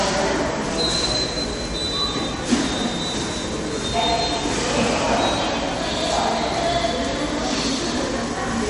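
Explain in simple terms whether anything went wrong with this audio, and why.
Throughout, the sound is dull above 10.6 kHz with a watery, swirling texture and smeared attacks, the signs of heavy MP3 compression, likely from too few bits.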